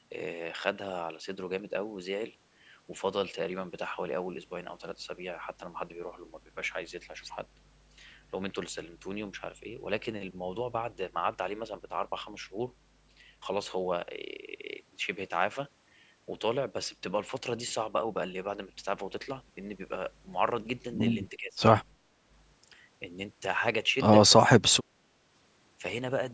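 At 21.32 s the speech dips hard until 21.6 s. It falls by roughly 20 dB. The same thing happens again from 24.4 to 24.7 s, a shorter loss. This is speech suppressed in double talk. The likely cause is both sides talking at once. The echo canceller could not tell this talker from its own loudspeaker echo, so it turned everything down.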